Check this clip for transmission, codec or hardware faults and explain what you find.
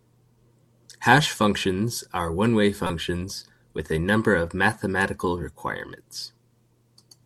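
There is one codec fault in the speech, a corrupt frame decoded from 2.86 to 2.90 s. Flipped bits in a single compressed frame led the decoder to misread its gains and codes, scattering energy to wrong frequencies. The result is a brief squeaky blip peaking around -15 dBFS.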